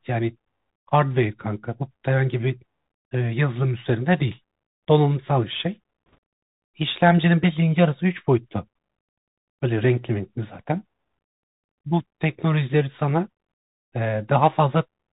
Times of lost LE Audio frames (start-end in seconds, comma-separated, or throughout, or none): none